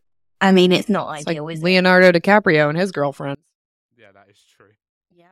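One channel inverted, from 3.35 s to the end: just after "and his", the speech collapses by about 34 dB and what remains is a faint copy of the voice. The likely cause is one stereo channel with reversed polarity. When the channels are summed to mono, the centred voice common to both cancels, leaving only the faint difference between them.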